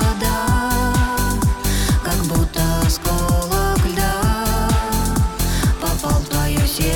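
No technical faults can be heard anywhere in the audio.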